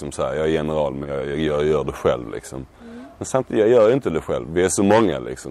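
At 1.03 to 1.07 s there is a short concealed packet loss: about 20 ms of audio arrived too late to decode, so the receiver extrapolated the preceding sound to cover the gap, then cross-faded back. It is heard as a brief smear or wobble.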